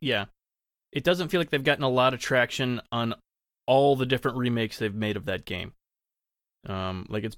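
No technical faults can be heard anywhere in the speech recording.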